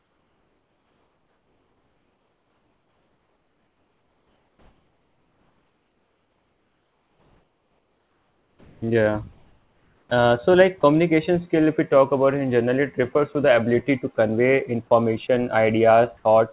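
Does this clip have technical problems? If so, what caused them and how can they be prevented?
Yes. The speech has three kinds of fault.

Sound chopped by the voice detector runs from 0.00 to 10.30 s, and again from 13.13 to 13.35 s. Across the first stretch almost all of the sound, about 9.6 s of it, gives way to synthetic fill. Quiet parts of the speech vanish. In the later stretch about 40 ms is replaced. The likely cause is a sender-side detector switching transmission on and off too eagerly. Lower the detector's sensitivity or add hangover time so it stays open through quiet passages.

Sound dropped by the voice detector occurs at 10.81 to 10.83 s. A tiny piece of the speech, about 10 ms, disappears. About 20 ms of steady noise stands in its place before the sound returns. This likely comes from the detector mistaking a soft moment for background and briefly stopping transmission. 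Widen the detector's onset and release margins, or disable discontinuous transmission, to keep word edges intact.

Comfort noise in place of the background appears from 16.17 to 16.25 s. For about 80 ms the real background is swapped for a flat, featureless hiss, about 2 dB quieter. This likely reflects the receiver filling a transmission pause with generated noise. The background sits about 40 dB below the loud parts. Turn off discontinuous transmission, or raise the rate of comfort-noise updates, so the fill tracks the real background.

Across the whole clip nothing reaches above 4 kHz, which points to a G.711 mu-law call path at 64 kbps.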